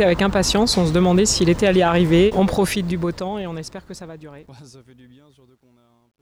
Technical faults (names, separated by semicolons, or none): truncation distortion on a fade